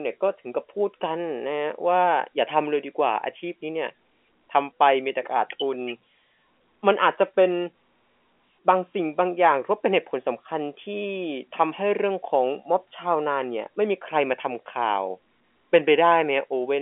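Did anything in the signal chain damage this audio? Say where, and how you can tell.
No, nothing here points to damage: the speech simply carries the narrow band of an ordinary G.711 A-law phone line, roughly 250 Hz to 3.4 kHz at 64 kbps, which is how a telephone call is meant to sound.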